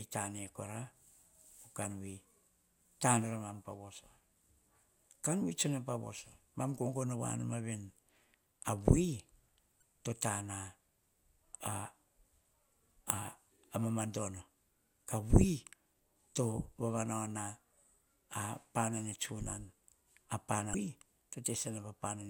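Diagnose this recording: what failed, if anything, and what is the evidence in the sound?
Codec stage, damaged data in the compressed stream: corrupt frames make the decoder lose sync, leaving brief glitches in the speech at 9.79–9.82 s and 20.71–20.74 s.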